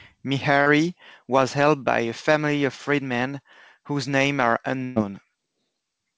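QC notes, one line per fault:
0.62–0.68 s, short concealed packet loss: about 40 ms never arrived in time, just before "was helped by a". The receiver carried the preceding sound across the hole and blended back into the real audio, so you hear a quick smear or wobble there.
4.84–4.98 s, burst of packet loss: right after "freedmen whose names are", about 120 ms went missing in a row. The decoder kept extending the last sound while fading it down, giving a held buzz or dying hiss. It then jumps ahead, and the skipped stretch is simply gone. Nothing is heard above 8 kHz, which fits a G.722 call path.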